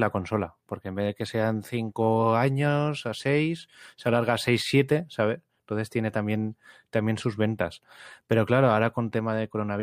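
No technical faults heard.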